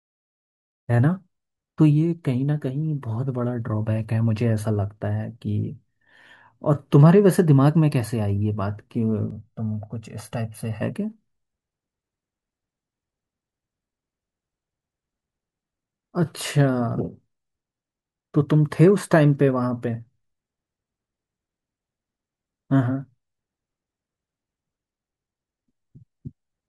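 From 9.31 to 10.82 s the speech turns hollow and phasey, the sign of channel delay (comb filtering). One channel runs roughly 1.5 ms behind the other, so when the two are summed, energy common to both cancels at evenly spaced frequencies, starting around 300 Hz and repeating about every 600 Hz above it. A spectrogram shows steady dark horizontal stripes across that stretch.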